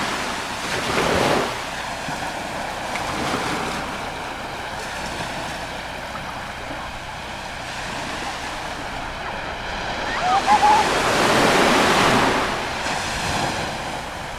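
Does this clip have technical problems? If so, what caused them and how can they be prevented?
No, nothing in this audio stood out as a technical problem on listening, so there is nothing here that needs preventing.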